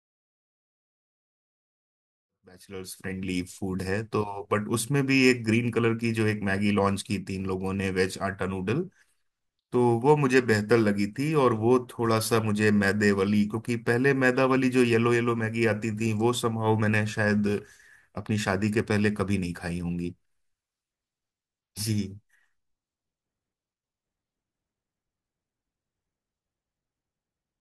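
No technical faults can be heard in this speech recording. It opens with a smooth fade-in, with the level rising gently from about 2.5 s until it reaches full level at 3.6 s.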